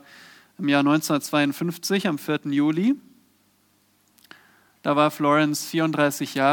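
No audible technical faults anywhere in the recording.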